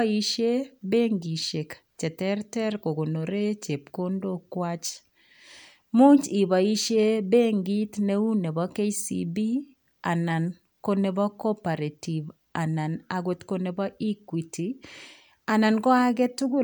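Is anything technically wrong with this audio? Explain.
No, nothing is technically wrong with this speech recording. I hear nothing anywhere in it that points to a technical problem.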